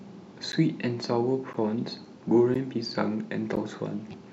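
Speech with a gap between chunks: 12 ms hard-edged silences at 0.52, 1.53, 2.54 and 3.56 s, one per 1-second chunk, showing as thin empty vertical stripes on the spectrogram and flat gaps in the waveform.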